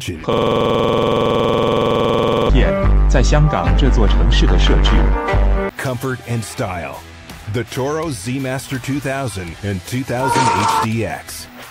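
From 0.33 to 2.49 s, a system hang loop repeats one 46.4 ms slice exactly at 21.5 Hz. It makes a rigid mechanical stutter, unlike irregular dropouts.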